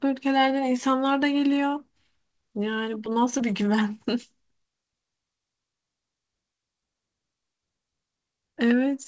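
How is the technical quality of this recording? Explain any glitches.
Two small glitches sit close together, both a little after the three-second mark, on speech that came through a WebRTC call path with a G.722-style codec (the bandwidth fits roughly 64 kbps). Nothing is there above 8 kHz.

At 3.06 s there's a repeated buffer. Fresh audio didn't reach the output device in time, so it replayed the chunk it had just played, once more. That chunk lasts about 5.33 ms, which fits a 256-sample buffer. Because the piece is so short and the joins are hard cuts, the result is a quick click rather than a stutter, with a few milliseconds of real audio pushed aside.

From 3.38 to 3.41 s there's short concealed packet loss. About 20 ms of the call didn't reach the decoder in time. The receiver covered the gap by extending the sound it had just decoded for about 14 ms and then blending back into the real stream. 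You hear it as a brief smear or wobble in the speech.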